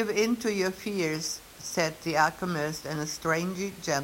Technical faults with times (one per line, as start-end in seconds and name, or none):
none